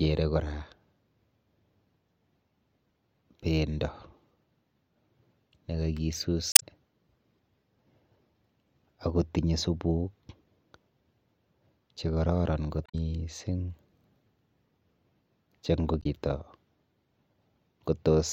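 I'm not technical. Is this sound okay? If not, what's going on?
No. The speech is interrupted three times by a short chirp or blip, at about 6.49 to 6.63 seconds, 12.83 to 12.95 seconds, and 15.99 to 16.06 seconds. Each lasts roughly a tenth of a second. This is damaged data in a compressed stream: small pieces of the compressed file were corrupted, so the player briefly misread those spots and had to find its place again.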